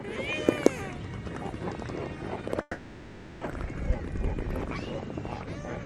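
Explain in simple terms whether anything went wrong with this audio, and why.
A long network dropout is the likely cause here: from 2.61 to 3.43 s the audio stopped arriving, and the player filled the gap itself. For about 0.8 s you hear a fading continuation of the last sound, then a moment of silence, and that stretch is lost.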